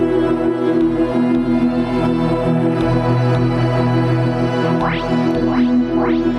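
Throughout the music there is gain pumping, likely from a fast limiter on excessive gain: the gain is pulled down on each loud sound, swinging around 5 dB. The waveform envelope looks flattened and breathing.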